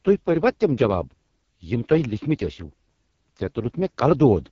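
The speech in this clip has passed through the AMR wideband (HD Voice) codec at one of its lowest modes, which fits the 6.6 kbit/s rate, for its whole length. At that rate the pulse-driven vocal tract model has too few bits to follow the voice closely, so the damage is heavy. The speech sounds rough and raspy throughout, and the band stops at about 7.2 kHz, with the range above 6.4 kHz carrying only shaped noise rather than real detail.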